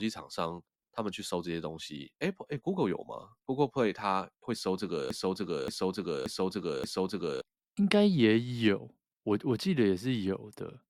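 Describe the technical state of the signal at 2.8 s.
Nothing at 2.8 s suggests a fault: the signal there is intact, with no dropouts, clicks, clipping or other artefacts audible at that point in the speech.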